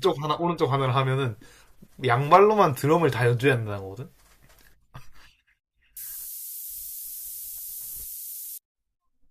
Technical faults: low bit depth with noise shaping

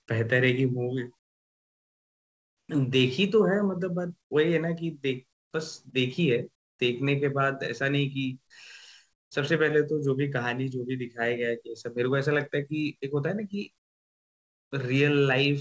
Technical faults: comfort noise in place of the background; short concealed packet loss

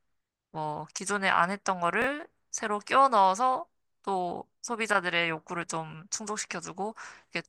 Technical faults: chunks out of order

